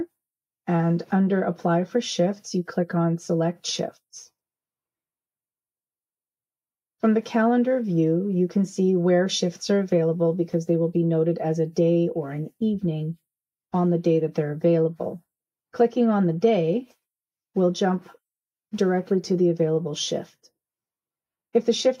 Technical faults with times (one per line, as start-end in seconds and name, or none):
none